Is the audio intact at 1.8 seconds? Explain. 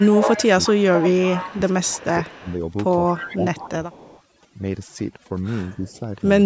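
No. Overdone noise removal runs through the whole clip and is active at 1.8 s. The reducer pushes frequency bands near its noise estimate down hard, taking quiet parts of the speech with them, so the background falls and breaks up into twinkling specks.

An echo leak also covers 1.8 s, spanning 0.00 to 2.55 s. A delayed copy of the speech trails the original by about 209 ms, sitting roughly 10 dB below it. It is likely a far-end loudspeaker echo that the echo canceller failed to fully remove and sent back.

Speech suppressed in double talk falls between 1.14 and 2.07 s, with around 0.7 s of that span affected. The talker's level dips by up to roughly 15 dB, likely because the canceller could not separate the talker from the echo and turned both down.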